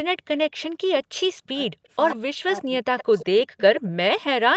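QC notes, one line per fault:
1.36–1.9 s, 2.15–3.58 s, 3.79–3.96 s: speech suppressed in double talk. The echo canceller likely mistook overlapping talk for echo, so the speech dips by up to about 40 dB.
2.1–2.16 s, 2.98–3.41 s, 3.59–3.81 s: echo leak. Residual loudspeaker echo likely got past the canceller, giving a copy of the speech delayed by 114 ms, about 10 to 15 dB below the talker.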